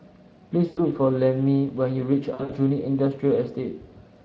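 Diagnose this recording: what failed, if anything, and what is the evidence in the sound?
Codec stage: Speex coding damage is plainly audible across the whole speech clip as a rough, hoarse grain on the voice. It points to a bitrate of around 20 kbps, where the CELP excitation is too coarsely quantised to rebuild the voice cleanly.

Network stage: VoIP packet loss concealed by the speech codec occurs at 0.65–0.81 s, covering 120 ms of lost audio, and at 2.33–2.52 s, where 120 ms of loss is scattered over 160 ms with runs up to 60 ms. The decoder extends the last pitch and filter with falling gain, so the voice smears into a buzzy tone or coloured noise that fades.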